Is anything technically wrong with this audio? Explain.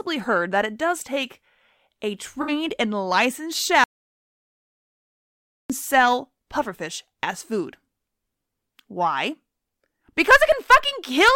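Yes. The speech has two faults.

At 2.41 to 2.52 s, after "it does take a", there is AAC frame loss with concealment. About 64 ms is missing, which fits three lost frames. The decoder patched it from earlier spectrum, leaving a brief smeared, noisy spot.

From 3.84 to 5.70 s, after "and licensed", comes an audio dropout to silence. The input was likely lost, leaving 1.86 s of silence with no room tone. Speech resumes at "sell pufferfish as food".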